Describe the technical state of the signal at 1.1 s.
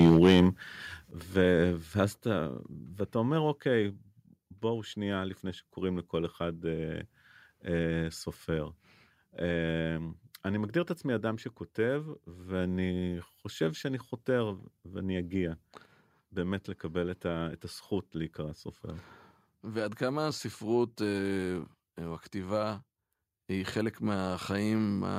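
At 1.11 s the microphone volume is stepped down: the speech and the background noise beneath it drop together by about 7 dB in a single instant, with no fade. The likely cause is the call software lowering the device's input volume in one step after judging the microphone too hot. On a waveform the envelope shrinks abruptly at that point. On a spectrogram every frequency band dims at once along a sharp vertical edge.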